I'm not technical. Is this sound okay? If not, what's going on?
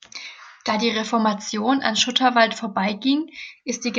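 Yes, it's fine: nothing in this recording sounds broken or out of place, so there's nothing here to worry about.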